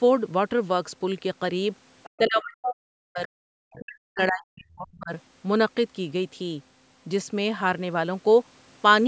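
From 2.03 to 2.1 s a brief, faint second voice sits about 25 dB under the speech. This is the other side's voice leaking through, likely from a loudspeaker that the echo canceller did not fully subtract. Unlike a dropout, something is added here rather than taken away.

From 2.18 to 3.31 s and again from 3.76 to 5.12 s, the talker's own speech sinks by as much as about 40 dB, for roughly a second in each stretch. This is speech suppressed in double talk, likely an echo canceller that could not tell the talker from the far end and turned both down at once. In contrast to the leak, something is taken away here. The main voice itself dips.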